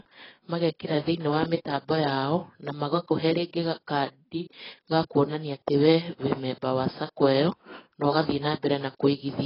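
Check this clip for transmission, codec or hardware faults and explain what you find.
One codec fault runs through the whole speech clip: AAC compression. Nothing is present above 5.5 kHz, and the band below it sounds heavily damaged, dull and smeared, with a warbling, fizzy texture on sibilants and sustained sounds. The likely cause is AAC-LC at a very low bitrate, around 16 kbps. At that rate the encoder lowers its cut-off and quantises the frequency lines so coarsely that it leaves holes in the spectrum.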